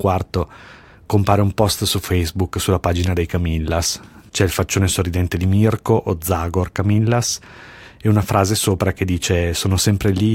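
No technical faults can be heard anywhere in this speech recording. There is nothing here that needs a timestamp or a closer listen.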